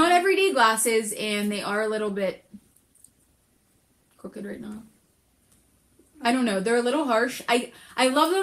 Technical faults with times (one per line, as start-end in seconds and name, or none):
2.08-5.49 call bitrate drop